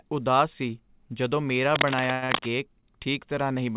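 Cable scratch noise runs from 1.75 to 2.46 s in this speech clip, starting just after "ਉਦਾਸ ਸੀ ਜਦੋਂ ਮੇਰਾ": dense, irregular crackling and rustling sits over the voice at roughly the same loudness as the speech itself. It is most likely a worn cable, plug or control being moved, so that its contact resistance jumps about rapidly and injects bursts of noise. Inside that stretch, a call audio freeze holds from 2.12 to 2.24 s. For about 100 ms the sound is carried on as a fading buzzy continuation of what came just before, likely because packets were delayed in transit and the jitter buffer ran dry. When they arrived, the audio resumed where it had stopped, so a gap was inserted and nothing was lost. Straight after, a short stall from a late packet stretches the sound from 2.24 to 2.31 s, filling about 46 ms. A second stall at 2.81 to 2.85 s fills about 18 ms. In each case a packet was missing at its playout moment, and the receiver prolonged the last sound with a slight buzz or dip until it turned up, then continued without dropping anything. 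The whole clip is band-limited to 4 kHz, which fits a G.711 mu-law call path at 64 kbps.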